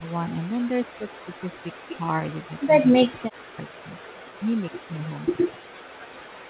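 An echo canceller most likely mistook this speech for loudspeaker echo while both sides talked at once, and turned it down: speech suppressed in double talk. The talker's level sinks in bursts at 0.0–0.73, 0.97–1.71, 1.87–2.09, 2.33–3.98, 4.38–4.68, 4.85–5.13 and 5.31–5.71 s, from a mild dip of about 10 dB to near-silence of about 40 dB, worst around 1.0–1.7, 2.3–4.0 and 5.3–5.7 s. The narrowband call path, with nothing above 4 kHz, stays steady throughout.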